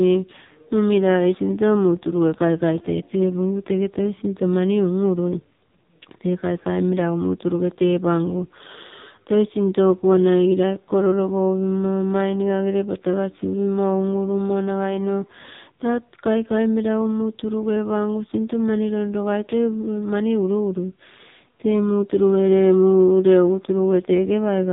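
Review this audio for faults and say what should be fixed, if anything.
The speech went through an AMR narrowband mobile codec (AMR-NB) at a low mode, and the heavy damage fits about 5.9 kbit/s. Throughout, nothing above 3.8 kHz survives, and the voice sounds buzzy and synthetic because too few pulses per frame drive the vocal-tract model. Route the call over a wideband codec or a higher AMR mode to prevent this.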